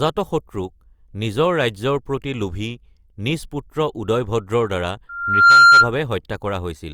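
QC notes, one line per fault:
5.09–5.92 s, loudspeaker feedback squeal: a steady 1.4 kHz tone swells over roughly 0.4 s to sit about 15 dB above the speech. The microphone is hearing its own loudspeaker. At that frequency the loop gain passes one, so the tone feeds itself until it stops.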